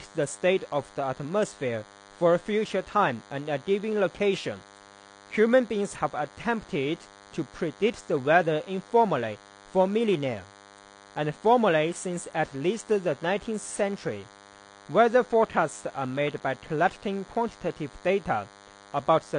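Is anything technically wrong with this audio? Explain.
Yes, two faults run through the whole speech recording.

A DECT cordless phone buzz is present from start to finish. A nearby DECT handset or base station transmits a short radio burst every 10 ms, and something in the audio chain rectifies that burst and passes it on as sound. The result is a steady, thin 100 Hz buzz stacked with harmonics, sitting roughly 25 dB below the speech. It continues through pauses as well as under the talking.

AAC compression damage is also plainly audible throughout, likely from AAC-LC coding at a low bitrate, which fits something around 32 kbps. A codec under that much pressure lowers its cut-off to save bits, and here nothing survives above 9.8 kHz. That takes the air and crispness out of the speech and leaves it dull and smeared. Sibilants and sustained sounds come out with a coarse, processed texture.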